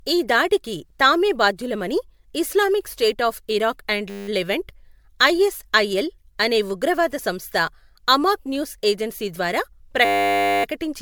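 Speech with a swirly, hollow, smeared texture throughout and blurred attacks, likely generation loss from several MP3 passes at around 128 kbit/s; spectrograms show scattered holes below a 20.1 kHz ceiling. A system hang loop appears after "స్టేట్ ఆఫ్ ఇరాక్ అండ్" (4.1–4.28 s) and after "అమాక్ న్యూస్ ఏజెన్సీ ద్వారా" (10.05–10.64 s). In each, a 10 ms fragment repeats into a 100 Hz buzz, which looks like an identical repeating waveform cycle and a harmonic comb on the spectrogram.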